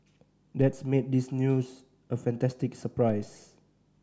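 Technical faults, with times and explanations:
0.61 s and 3.10 s, DC step: at each moment the waveform's zero line jumps by about -34 dBFS and then drains away through a very low high-pass near 2 Hz, taking a few tenths of a second to settle. The sudden shift is heard as a low thump or click, and the speech runs on intact with no gap or smear. That is what separates it from a dropout or an impulse click.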